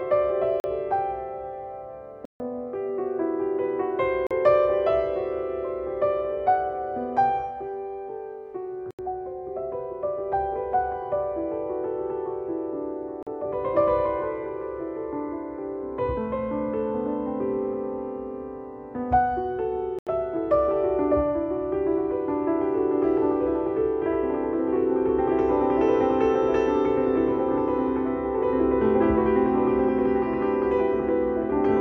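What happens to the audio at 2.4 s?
At 2.4 s the sound is coming back out of a block of digital silence that starts at about 2.25 s, so there's a hole of roughly 147 ms. That stretch was played as silence, most likely because the program didn't get the output buffer filled in time. The audio drops straight to nothing and jumps straight back with no fade, so you hear a short gap.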